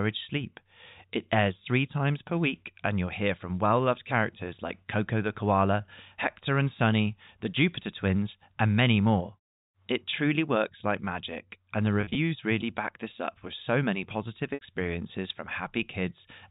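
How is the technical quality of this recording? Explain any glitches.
Two short dropouts from packet loss with pitch repetition spoil the telephone-band sound, which stops at 4 kHz as the line coding allows. At 12.01 to 12.15 s, about 90 ms is lost in bursts of up to 30 ms across 140 ms, and at 14.54 to 14.61 s a 70 ms block goes. The receiver fills each gap by looping the last pitch cycle, so you hear a brief held, buzzy hum.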